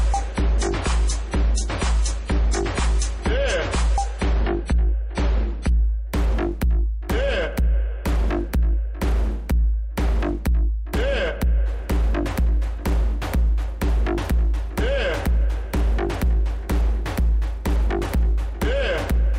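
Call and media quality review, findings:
Adaptive stream starting at a low bitrate, 0.0–6.0 s: dull, smeared sound with heavy codec artefacts; nothing above 10.5 kHz, consistent with a 32 kbit/s MP3 rendition. Player steps up to a higher rendition, fitting 128 kbit/s, at 6.0 s, no gap. Spectrogram: flat ceiling, then a higher ceiling.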